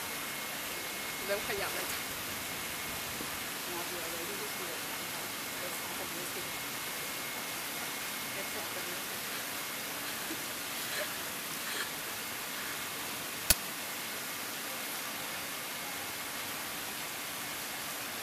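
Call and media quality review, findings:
Uninitialised buffer at 13.50 s. Loud burst of digital noise, about 12 ms long. Probable component: playback buffer handling. Block played before any audio was written, so stale memory reached the output as samples. Length fits a 512-sample buffer.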